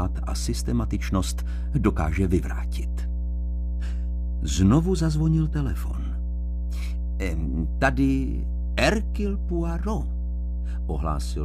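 From the first moment to the last, a steady mains hum sits under the sound: a low, unwavering tone at 60 Hz with some low harmonics, roughly as loud as the wanted audio itself. Power-line current is leaking into the signal path, most likely through a ground loop or a nearby transformer. Unlike handling noise or wind rumble, it never swells or drifts; its pitch stays locked to the mains frequency throughout.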